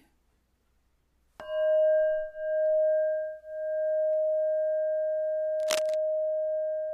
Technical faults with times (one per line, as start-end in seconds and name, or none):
5.59-5.95 cable scratch noise